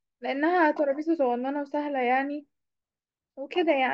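Speech recording with no audible technical faults.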